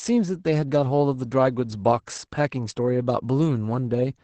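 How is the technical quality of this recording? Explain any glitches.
The recording is clearly compromised by Opus voice compression, audible for the whole of the speech. Throughout the clip, the SILK speech coder is running in wideband mode at a low rate, which fits about 12 kbps. It models the voice with linear prediction and codes the excitation coarsely, so the speech sounds muffled, slightly hoarse and faintly robotic. On a spectrogram, energy stops abruptly near 8.6 kHz, leaving an empty band above, and the harmonics look smeared in 20 ms blocks.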